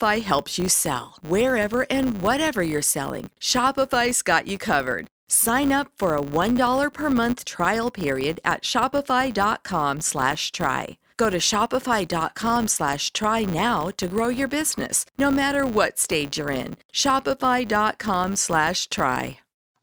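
A steady 100 Hz buzz runs under the speech from start to finish, rising and falling with the speech's loudness. This is a filter restarted on every block: it drops its state each 10 ms and starts from silence, so every block opens with a tiny transient.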